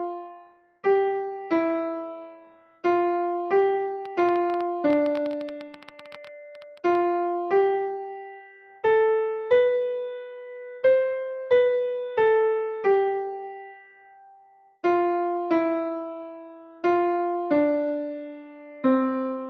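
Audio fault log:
Throughout: noise suppressor applied to music or sounds. A speech-tuned suppressor stays active across the whole clip and keeps judging the sustained parts of the audio to be noise. Level swings by around 5 dB as it grabs and releases. Onsets pass while held tones, ambience and reverb tails sink, so the sound pumps and thins. Unlike the isolated cuts below, this breathing never stops, because the suppressor reacts continuously to the material.
0.19–0.84 s, 2.33–2.84 s, 14.37–14.83 s: sound cut by the noise suppressor. In each of these stretches the same processor mistakes a steady or decaying passage for noise and clamps it much harder than its usual swing. The drops reach about 19 dB, 15 dB and 19 dB, each lasting roughly half a second or a bit more. Decays are chopped short while sudden attacks mostly survive. These are deep, discrete holes, distinct from the shallow pumping that runs throughout.
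4.06–6.96 s: train of clicks. About thirty short, similar-shaped ticks arrive at roughly 10.4 per second with uneven spacing, peaking about 5 dB above the sound. They sit on top of the audio and continue regardless of what it is doing. That independence separates them from suppressor artefacts, which follow the signal. The likely source is interference from nearby equipment or a faulty connection or power supply, which would inject a pulse repeatedly for a few seconds.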